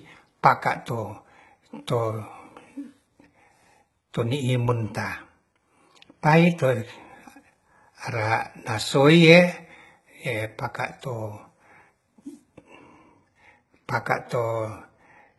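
From start to finish the treble of this speech sounds bright but synthetic, with s sounds turning gritty and metallic, likely from heavy HE-AAC compression at a rate that fits about 16 kbps. Instead of a dull, low-passed top, the highs are rebuilt from copied lower bands, so they never match the harmonics below.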